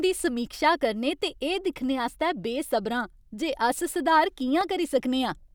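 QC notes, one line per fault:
0.45–4.61 s, clock drift buffer slips: a click recurs every 1.39 s during the speech, about four in all. This is likely from two clocks disagreeing by roughly 100 ppm, dropping or repeating a handful of samples. Spectrograms show thin vertical broadband lines; waveforms show step discontinuities.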